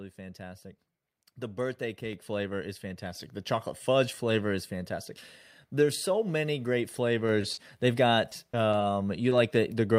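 A speech recording with four kinds of fault. The call software raised the microphone's input volume twice, at 2.13 s just before "flavor is" and at 3.15 s just after it, so voice and background jump up together by about 4 dB and then about 5 dB. A short stall from a late packet follows "so many great" at 7.41 to 7.45 s: the jitter buffer ran dry and the last sound is held about 20 ms too long before continuing. Short concealed packet loss occurs at 7.53 to 7.59 s and 9.29 to 9.37 s, where the receiver patched 40 ms and then 20 ms of lost audio by extending the previous sound, leaving a brief smear. In the second of these the timing slips by a few milliseconds. Between 8.29 and 8.83 s, repeated packet loss gives a robotic sound: four gaps of up to 20 ms, about 15% of that span, are each filled by continuation, making the audio choppy.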